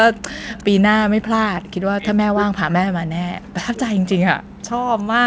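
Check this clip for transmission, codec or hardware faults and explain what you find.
Two faults turn up, both pointing at the far end's echo handling.

From 0.48 to 0.64 s there's an echo leak: a faint copy of the speech, roughly 25 dB down, trailing by 356 ms. That's likely a loudspeaker echo the canceller didn't fully remove.

From 1.82 to 4.21 s the speech is suppressed in double talk, turned down in stretches adding up to about two seconds, at worst by roughly 40 dB, likely as the canceller ducks the talker while the other side speaks. The top end stops at 8 kHz throughout, which fits the wideband call codec.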